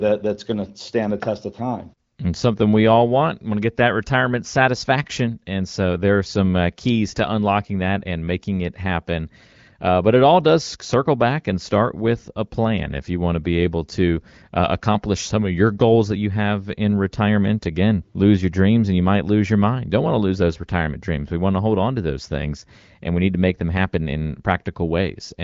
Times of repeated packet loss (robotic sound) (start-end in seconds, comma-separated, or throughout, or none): none